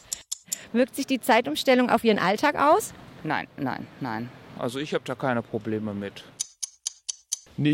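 From 4.57 s to the end, playback likely runs against a mismatched clock, leaving a section at the wrong speed at 0.868 times its recorded rate. Pitch and tempo drop together, so the sound turns slower and sits about three semitones lower.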